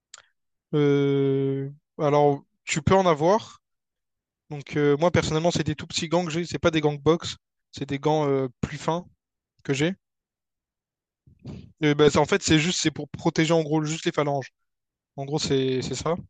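No technical faults occur anywhere in the speech, so there is nothing to set out in time order.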